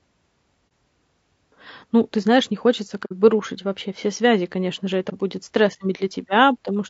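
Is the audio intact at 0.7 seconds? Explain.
No. At 0.70 s an AAC frame was lost and the decoder, finding nothing to play, set that frame's spectrum to zero. Because AAC frames overlap, the surrounding windows fade the speech down into the gap and back up out of it, so this AAC frame loss with muting sounds like a brief dip of about 30 ms, which fits a single dropped frame.

The speech around that moment also sounds rough and grainy, with noise filling the spaces between the pitch harmonics and a thin, artificial-sounding top band. That fits low-delay AAC compression, likely AAC-ELD at around 32 kbps. Its short frames resolve the harmonics of the voice poorly and use bits less efficiently, so at this rate the coding damage is plainly audible.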